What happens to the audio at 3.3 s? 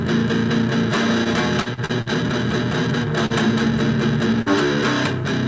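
At 3.26 to 3.33 s there is short concealed packet loss. About 40 ms never arrived, so the decoder extended the preceding sound, leaving a brief smear or wobble.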